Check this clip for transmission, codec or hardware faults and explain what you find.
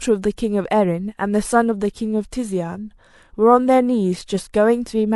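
A corrupt frame decoded fault affects the speech from 4.35 to 4.44 s. Damaged bits in a few consecutive compressed frames were decoded anyway, so misread gains and codes place energy at the wrong frequencies. The result is a brief chirpy burst peaking around -20 dBFS.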